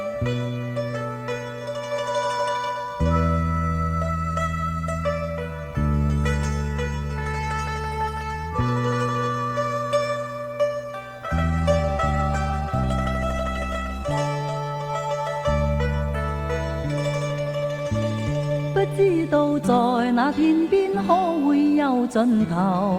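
A call bitrate drop hits the audio from 11.13 to 14.35 s: the bandwidth estimate fell and the encoder was pushed down to a rate that points to about 18 kbps, from about 32 kbps, for roughly 3.2 s. The coarser coding makes the sound rough and watery until the bitrate recovers.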